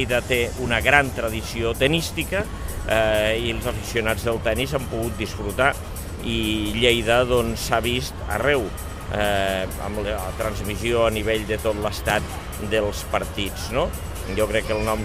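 No technical faults can be heard in this audio.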